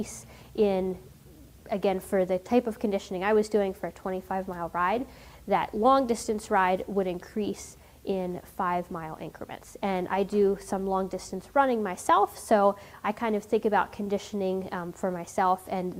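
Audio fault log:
No audible faults were found anywhere in this audio.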